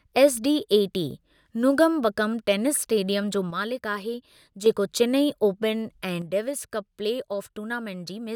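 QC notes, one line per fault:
3.51–4.66 s and 6.22 s to the end: one channel drops out. Right after "नोंगमबकम टेनिस इस्टेडियम जो" the level steps down by about 6 dB until "जेको चिनाई", then again through the close. That drop likely means one side of the stereo pair went silent, leaving half the mono sum.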